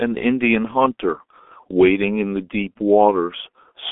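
Throughout, heavy G.723.1 codec damage: nothing passes above 3.7 kHz, and slow 30 ms frame updates leave the speech muffled and hoarse, consonants blurred.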